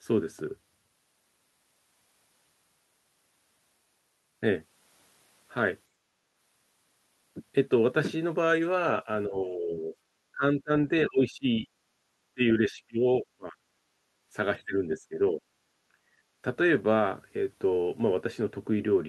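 At 5.89 to 6.28 s the room tone beneath the speech drops by about 15 dB and then recovers. This is background gated by the echo canceller: while the far end plays through the loudspeaker, the canceller clamps the microphone hard, so the ambient noise briefly vanishes. On a spectrogram the broadband noise floor thins to a darker band across all frequencies. On the waveform the low-level hiss narrows for a moment and then widens again.

From 9.06 to 9.94 s the talker's own speech sinks by around 10 dB. Deeper dips follow at 10.32 to 11.67 s (around 25 dB) and 12.34 to 13.57 s (around 30 dB). This is speech suppressed in double talk, most likely because both sides were speaking together and the canceller could not tell the local voice from the loudspeaker echo, so it attenuated both. The speech sounds ducked, dull and chopped into pieces. The waveform envelope shows notched, broken bursts, and the spectrogram shows harmonics and upper energy fading out in patches.

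Brief background gating returns at 11.95 to 12.06 s (about 10 dB) and 13.85 to 14.3 s (about 12 dB). Double-talk suppression hits again at 14.58 to 15.43 s, cutting the speech by around 20 dB. A final background gate at 15.88 to 16.29 s drops the room tone by about 14 dB, and each gate appears as the same short darkening of the noise floor.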